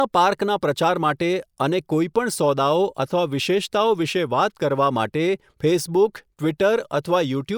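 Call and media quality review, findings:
No findings in this call and media quality review; nothing to report.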